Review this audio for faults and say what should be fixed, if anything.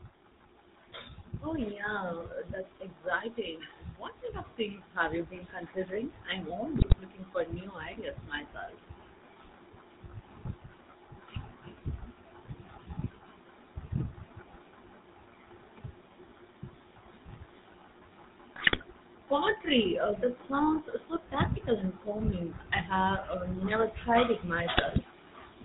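Throughout the 26 seconds the speech has a buzzy, gravelly roughness and a dull top end, with nothing above 4 kHz. This is GSM full-rate codec damage and fits the 13 kbps full-rate coder, which models the vocal tract and excites it with a coarse pulse train that keeps only every third sample, so the fine texture of the voice is lost. To prevent it, capture or transmit over a wideband codec such as AMR-WB or Opus instead of GSM full rate.

At 6.76–6.97 s, 18.56–18.83 s and 24.74–24.99 s the voice briefly breaks into squawks, pops and gargling. These are GSM bit errors. Flipped bits corrupted the filter, pitch and gain values the decoder relies on, so for a run of 20 ms frames the spectrum bends and the level jumps. The density of the damage suggests a few percent of bits in error, as on a weak radio link. To prevent it, use a stronger link or a channel with error protection and bad-frame concealment that mutes or repeats damaged frames.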